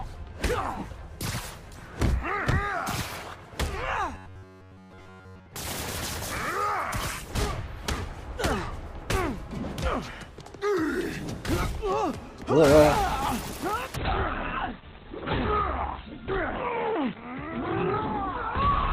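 From 4.15 to 5.54 s the sound turns into a rigid metallic buzz at about 94 Hz, likely robotic sound from repeated short buffers. Each roughly 10.7 ms slice is replayed in place of most of the real audio, giving a fixed pitch instead of the random crackle of dropped samples.

At 13.96 s the quality falls abruptly and stays low to the end. Codec artefacts rise, consistent with an adaptive stream at a lower bitrate, in a way that fits a drop from 64 to 12 kbit/s Opus. Unlike a dropout, there is no gap.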